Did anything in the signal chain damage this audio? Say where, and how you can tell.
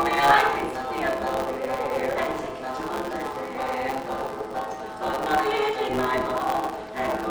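Yes, at the driver or buffer stage, all the way through. There's a steady 138 Hz buzz, and the audio runs 1.6 times fast at roughly normal pitch. That's a block size mismatch (truncated): blocks, likely 512 samples, are written longer than they're read, so each tail gets dropped.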